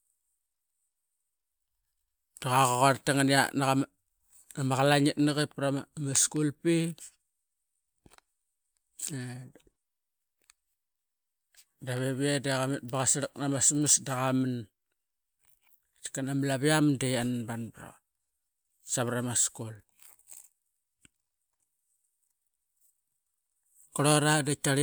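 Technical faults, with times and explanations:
No technical faults detected.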